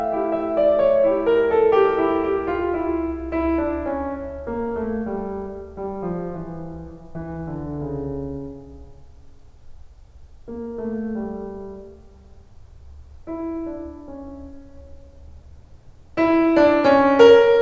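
The music came through the call path without faults, and its content stopping at 8 kHz fits the wideband G.722 coding at 64 kbps that such a path would apply.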